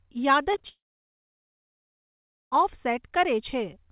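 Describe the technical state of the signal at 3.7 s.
At 3.7 s the signal is intact, with no fault present, the speech carrying only the ordinary narrowband character of the call path, with nothing above 4 kHz.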